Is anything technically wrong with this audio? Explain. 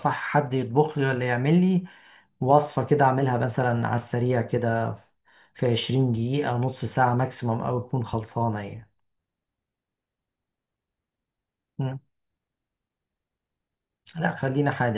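No, nothing is technically wrong with this audio.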